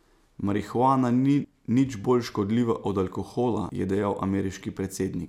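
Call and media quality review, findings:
Compressed frames skipped at 1.44 s, before "nič bolj škodljiva od", and at 3.69 s, after "bolj škodljiva od alkohola". Roughly 200 ms and 150 ms of audio missing, several 26.1 ms frames each. Decoder dropping frames; overlap smears each join into a brief blip.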